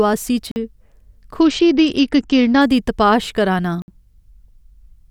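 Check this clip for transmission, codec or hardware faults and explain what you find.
The clip has three transmission faults: two short dropouts to digital silence and one stretch of reduced Bluetooth codec quality.

The first block of digital silence runs from 0.51 to 0.56 s. The second runs from 3.82 to 3.88 s, right after "दी तपाश करा नां". They last about 46 ms and 60 ms. In each case a run of samples was replaced by zeros, most likely because the output buffer was not filled in time. The speech cuts out and back in abruptly, with no fade, leaving a short hole.

A Bluetooth SBC bit pool drop lasts from 1.40 to 2.61 s, ending just before "दी तपाश करा नां". The sound points to a congested link. The sender appears to have lowered the SBC bit pool from 31 to around 9, which fits a rate near 72 kbps. At that rate the upper sub-bands get almost no bits and the remaining bands are quantised coarsely. 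The treble goes dull and a gritty noise appears over the speech until quality returns.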